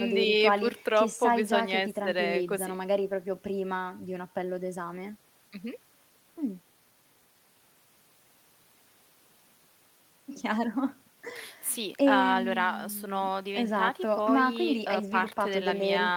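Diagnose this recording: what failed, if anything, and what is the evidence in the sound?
Nothing failed; no fault is audible anywhere in it.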